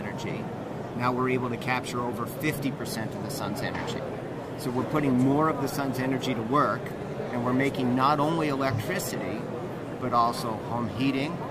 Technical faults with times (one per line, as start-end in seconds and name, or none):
none